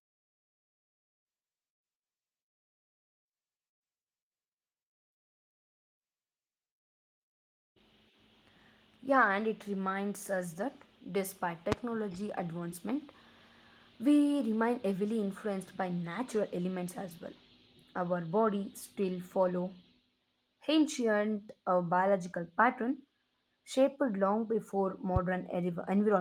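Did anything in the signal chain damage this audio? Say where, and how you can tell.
Yes, two loud pops: 11.72–11.75 s and 25.16–25.19 s, right after "long before," peaking about 20 dB and 15 dB over the sound. They're likely analogue wiring transients, from a plug or switch spiking the line.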